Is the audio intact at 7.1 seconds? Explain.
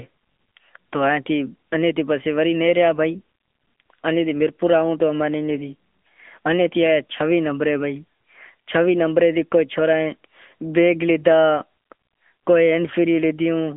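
No. At 7.1 seconds, as throughout the clip, the speech passes through the AMR narrowband mobile codec. Nothing above 3.5 kHz survives. A coarse vocal-tract model rebuilds each frame, leaving plainly audible buzzy, synthetic damage that fits an upper-range rate near 10.2 kbps.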